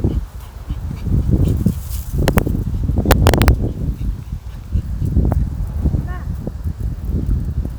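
At 2.28 s the sound breaks into integer overflow, lasting to 2.38 s. A sum or gain ran past the largest integer the format can hold. It wrapped to the opposite sign instead of being held at the limit. The level is driven about 3 dB past that limit, so every peak over it flips across the full range. The result is violent cracks, harsher than clipping. It returns from 3.11 s to 3.48 s, longer and again driven about 3 dB over.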